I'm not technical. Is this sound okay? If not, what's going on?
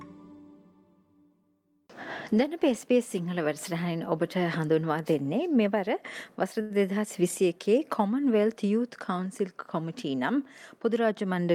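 No. At about 6.61 seconds the sound briefly sticks, holding the same tone for roughly a tenth of a second (6.61 to 6.72 s), before carrying on where it left off. This is a short stall from a late packet. The audio travels in small chunks, and one arrived late. The player had run out of stored sound, so it stretched the last bit until the chunk turned up. Nothing is lost, but that moment drags.

Near the end, from 11.12 to 11.52 seconds, the sound hurries. It plays about 8% faster while the pitch stays the same, so it feels slightly rushed rather than squeaky. This is a jitter buffer speed-up. The player had built up more waiting sound than it wanted, so it snipped out tiny repeating slivers in quick succession to catch up. Together these come to a few hundredths of a second.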